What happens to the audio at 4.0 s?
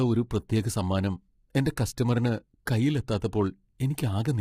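Just before 4.0 s, from 3.96 to 3.98 s, there is pre-echo. A soft hiss arrives about 20 ms ahead of a sharp attack, and the attack itself sounds blunted and smeared. This happens because a transform codec spreads its quantisation noise across a whole block. When the onset lands late in that block, noise sized for the loud attack also fills the quiet gap before it.

That block noise sits on top of heavy low-delay AAC compression running through the whole clip. The speech sounds rough and grainy, with noise filling the gaps between harmonics and a thin, synthetic-sounding top band. The likely cause is AAC-ELD at a low bitrate, which fits something around 24 kbps. Its short frames resolve pitch harmonics poorly, and too few bits remain to keep the detail clean.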